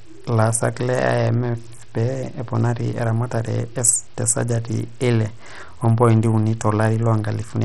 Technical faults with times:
0.00-7.65 Bluetooth SBC compression

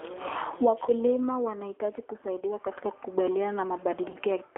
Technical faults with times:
0.00-4.57 G.729 codec
0.86-0.93 VoIP packet loss concealed by the speech codec
2.40-2.43 VoIP packet loss concealed by the speech codec
4.10-4.16 VoIP packet loss concealed by the speech codec

